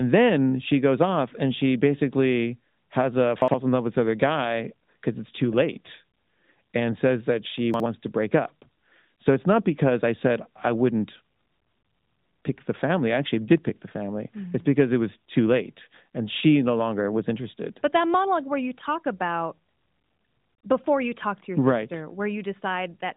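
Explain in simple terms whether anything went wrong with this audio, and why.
Chunks out of order at 3.42 to 3.54 s, after "she basically has a", and 7.74 to 7.86 s, before "to break up". In both spots a 60 ms slice of sound plays one slot late, swapping places with its neighbour. That causes a jumbled blip.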